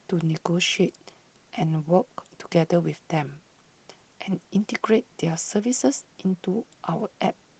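No technical faults are audible.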